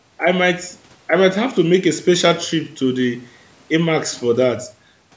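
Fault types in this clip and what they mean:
Nothing stood out on listening; the speech carries the narrowed, call-style sound of microphone processing, with nothing above about 8 kHz.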